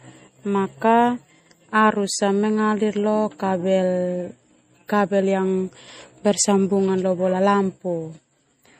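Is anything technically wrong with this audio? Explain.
Yes. Throughout the speech there is plainly audible codec damage, likely from MP3 compression at a low bitrate, which fits something around 40 kbps. Short of bits, the encoder has discarded everything above 15.2 kHz and zeroes weaker frequency lines, which then drop in and out from frame to frame. The result is a watery, swirling texture, metallic chirping on s sounds, and consonant onsets that smear rather than start cleanly.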